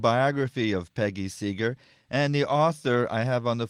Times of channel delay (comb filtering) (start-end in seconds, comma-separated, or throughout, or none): none